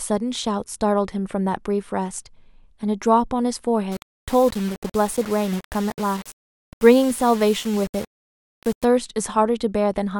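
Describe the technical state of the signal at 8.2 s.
At 8.2 s the speech is grainy and gritty, inside a stretch from 3.92 to 8.85 s that points to low bit depth without dither, likely a 6-bit rounding. Each sample snaps to a coarse step, so the error follows the speech at roughly 20 dB below it. Unlike dithered noise or a steady hiss, this grit rises and falls with the speech, roughening quiet tails and vanishing in silence rather than sitting underneath as a constant floor.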